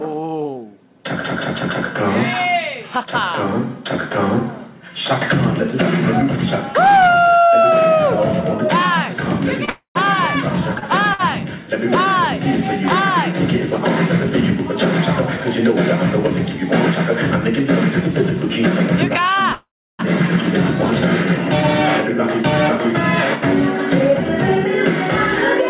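From 9.65 to 11.21 s come scattered short gaps: about three small holes, the longest about 50 ms, patched by extending the preceding sound, so they come across as brief ticks or smears rather than dropouts. Inside that stretch, at 9.69 to 9.97 s, a call audio freeze stretches the last sound into a fading buzz or hiss for 257 ms, ending in about 100 ms of silence. The likely cause is delayed packets draining the jitter buffer. The audio then resumes where it stopped, with nothing skipped. A second, longer freeze runs from 19.52 to 20.01 s, 467 ms in all, including roughly 310 ms of silence. From 22.41 to 25.60 s a jitter buffer speed-up trims about 40 ms of pitch-period fragments, so the audio runs 1% fast at unchanged pitch. Throughout, nothing sounds above 4 kHz, which fits the narrowband G.711 mu-law call path at 64 kbps.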